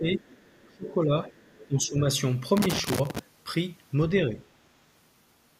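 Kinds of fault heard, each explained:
speech suppressed in double talk: the talker's level keeps sagging while someone else is speaking, most likely an echo canceller ducking both voices when it can't tell them apart. It dips by roughly 15 to 20 dB early on, from 0 to 2 s, then barely at all around 4.3 s.
other side's voice leaking through: a faint second voice sits under the talker, most likely loudspeaker playback the echo canceller didn't fully strip out. It's quiet, around 25 to 30 dB down, showing up between 0.15 and 0.94 s and again from 1.27 to 1.66 s.
loose connector crackle: from about 2.57 to 3.19 s there's an irregular burst of crackling and scratching, the sound of a dodgy contact making and breaking as it shifts. The signal gets chopped up through that stretch.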